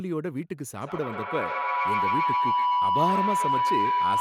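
From 0.81 s to the end, a feedback howl builds near 1 kHz. The speaker-to-microphone loop gains level each pass, repeating about every 150 ms and peaking about 4 dB above the speech.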